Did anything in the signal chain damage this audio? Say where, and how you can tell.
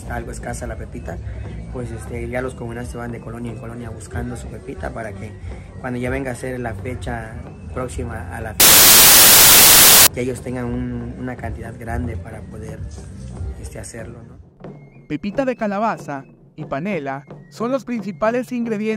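Yes. Sample-format conversion fails from 8.60 to 10.07 s: samples built from the wrong bytes. Low-order bits swamp each value, giving loud, harsh broadband noise.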